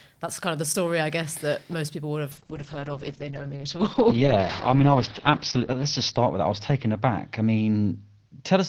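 A call bitrate drop hits this speech clip at 2.33 s and persists to the end: the bandwidth estimate collapsed, so the encoder fell from about 32 kbps to about 8 kbps, holding the lowest rate for roughly 3.3 s. Coding that coarsely, it also narrows the audio band from 20 kHz to 6 kHz, so the speech turns muffled and dull, with a rough, watery texture that never recovers before the clip ends.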